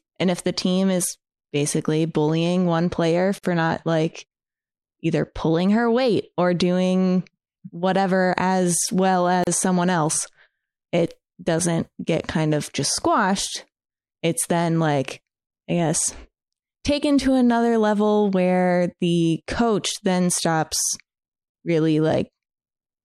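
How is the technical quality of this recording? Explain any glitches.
The speech is broken by four short silences, spaced 6 seconds apart. Each is a gap at a join of encoded pieces. They fall at 3.39 s, after "basically bullying one player" and before "not like"; at 9.44 s, after "doing whatever as well"; at 15.47 s, after "then like"; and at 21.50 s. The first lasts 51 ms. The others last about 34 ms. The audio was encoded in separate chunks and joined without trimming. Each chunk's start-up delay and end padding stayed in. The sound drops out briefly, then resumes where it left off.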